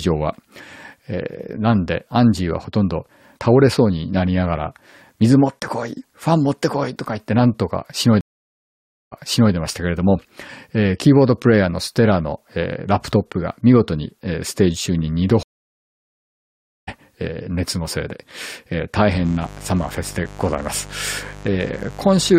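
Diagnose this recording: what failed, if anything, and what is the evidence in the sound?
Two separate problems here: a network fault that hits twice, and an analogue wiring fault near the end.

The network side shows two stream reconnects. At 8.21 s the audio drops out for about 0.91 s and comes back around 9.53 s, but 0.42 s earlier than where it left off, so you hear a short stretch again, as when a server resends a burst. The second is at 15.43 s: 1.44 s of silence, then it resumes around 16.89 s roughly a second later, so that chunk is simply gone. Each time the connection broke, the player restarted its decoder mid-stream, and the first frame fades in.

The analogue wiring fault is mains buzz from 19.06 s to the end: a steady, raspy 50 Hz buzz sitting around 20 dB below the signal. Something like a dimmer, a rectifier or a missing shield is letting sharp switching spikes into the path twice per mains cycle. 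That gives harmonics of 50 Hz reaching up to several kilohertz, which is why it sounds gritty rather than like a pure hum.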